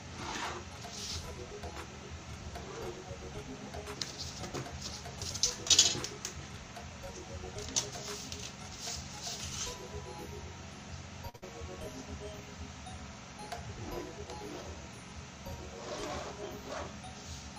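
A short stall from a late packet at 11.29 to 11.36 s holds the audio in place for 46 ms: the packet missed its playout time, the jitter buffer ran dry, and the receiver stretched the last sound until the packet arrived. Nothing is skipped, but playback now runs 46 ms later. A burst of packet loss follows immediately, at 11.36 to 11.44 s. Here the data never arrived in time. About 60 ms of concealment continues the final sound and fades it, and the audio then resumes roughly 60 ms further on, with that stretch lost. A jitter buffer speed-up at 14.12 to 14.33 s plays the audio at 113% speed without changing pitch. The buffer was holding more audio than its target, so the receiver repeatedly cut out pitch-period-sized slices, about 40 ms in total, and the passage sounds hurried.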